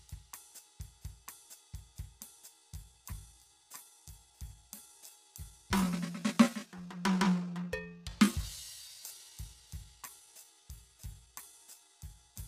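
From 2.50 s to the end of the music, a time-stretched section: software likely stretched this stretch of audio to fill a longer slot, slowing it to about 0.71 times its original speed while holding pitch by repeating short fragments. The pace drops abruptly at 2.50 s yet the pitch stays put, and the slowed passage drags.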